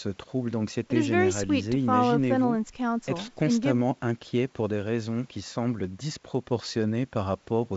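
Nothing is technically wrong with this speech recording, which has come through G.722 wideband telephone coding at 64 kbit/s with its normal top end of about 7.7 kHz.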